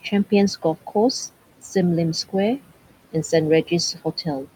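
Noise suppressor artifacts run through the whole clip. The suppressor pulls the room noise, which sits about 18 dB below the speech, down by about 17 dB in gaps, so the background sinks between words and swells back under them. Unlike a noise gate's hard on-off switching, the change is frame by frame and band by band.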